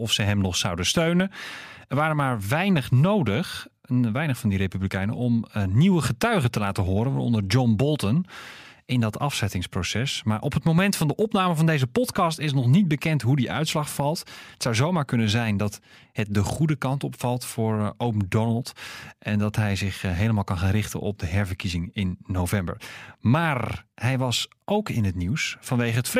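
No technical faults are audible anywhere in the recording.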